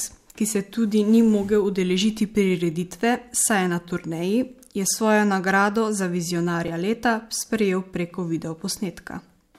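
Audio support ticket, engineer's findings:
Repeated buffer at 6.68 s, between "je svojo nagrado za" and "leta sprejel preko video": a 2.67 ms slice plays twice more, giving a brief buzzy click. This fits a 128-sample buffer underrun. Unlike a dropout, nothing goes missing.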